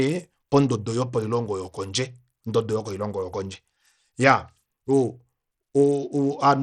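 From start to end the speech carries plainly audible Bluetooth SBC compression damage, likely from a starved bit pool, which fits a rate near 80 kbps. Treble flickers in and out over a gritty noise floor. A spectrogram shows ragged, patchy upper bands.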